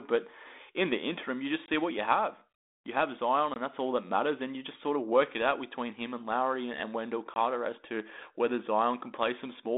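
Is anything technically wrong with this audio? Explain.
Yes. At 1.66, 3.54 and 7.34 s the speech drops into a hard-edged silent gap of about 20 ms, then resumes slightly distorted. This is packet loss on an ADPCM call: a single lost packet throws the decoder's adaptive prediction and step size out of step with the sender's, until they resynchronise over the following tens of milliseconds. The 32 kbit/s G.726 band-limited line, about 250 Hz to 3.7 kHz, carries only light coding roughness.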